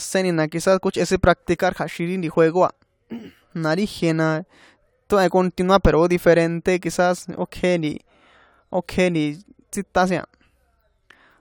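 No technical fault can be heard anywhere in this recording. The speech runs its full course with no event worth marking.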